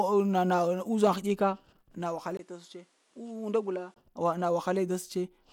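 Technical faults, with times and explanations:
2.37–3.96 s input switched to a poorer device: a 20 ms gap, then duller, quieter, faintly noisier sound cut above 11.8 kHz, likely from a narrower-band microphone.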